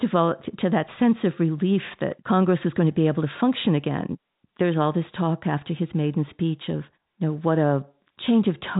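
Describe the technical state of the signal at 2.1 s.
At 2.1 s the speech is intact, carried cleanly over G.711 telephone coding with nothing above about 3.8 kHz.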